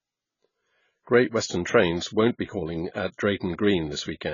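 AAC compression throughout: the speech stops above 7 kHz and sounds dull and warbly, likely from coarse AAC-LC quantisation that fits a bitrate near 16 kbps.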